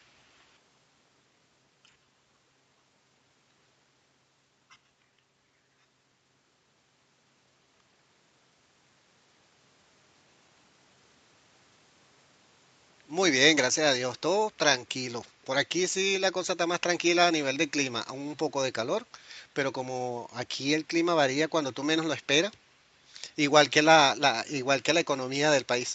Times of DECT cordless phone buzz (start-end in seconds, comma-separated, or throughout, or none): none